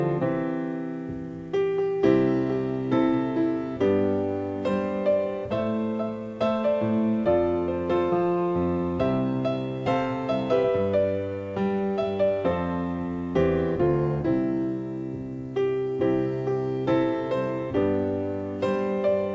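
Nothing here sounds broken to my ears; it's just audio that came over a call link, with the top end stopping around 8 kHz, which fits a wideband codec such as G.722.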